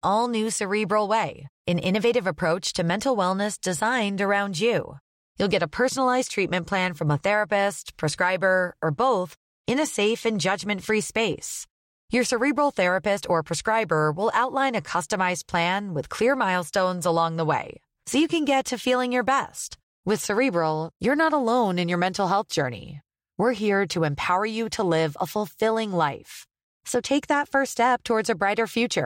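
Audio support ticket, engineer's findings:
No audible faults found.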